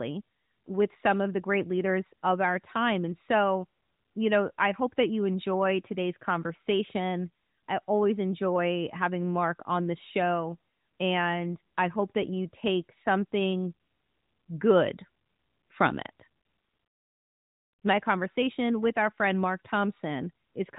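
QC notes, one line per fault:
No faults found; the speech carries the expected AMR narrowband mobile codec character, with nothing above 3.8 kHz and light coding texture that fits the 12.2 kbps mode.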